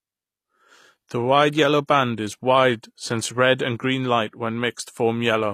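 HE-AAC compression, running the whole way through, is the likely cause of the plainly audible damage here. The upper speech band sounds rebuilt by spectral band replication rather than coded, which fits a low bitrate around 24 kbps. Its mismatched harmonics leave s sounds gritty and lispy.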